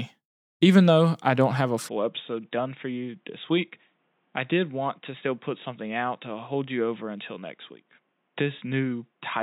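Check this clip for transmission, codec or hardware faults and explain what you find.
One fault: from 1.89 s, right after "I don't have a", to the end, the speech turns dull and boxy, with nothing above 3.8 kHz, a level drop of about 5 dB and a new background noise roughly 45 dB down, with no gap at the change. This points to the input switched to a poorer device, likely another microphone or a headset call profile with a narrower band and its own noise.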